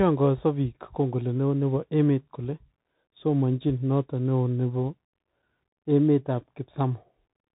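From start to finish the speech has gone through a Bluetooth CVSD headset codec, and it's easy to hear. Nothing gets through above about 3.8 kHz, so the whole thing sounds boxed-in and phone-like, which fits a 64 kbps narrowband headset link. CVSD codes each sample as a single up-or-down step that adapts its size, so loud high content outruns the step and smears, s sounds come out scratchy, and there's a grainy hiss riding under the speech.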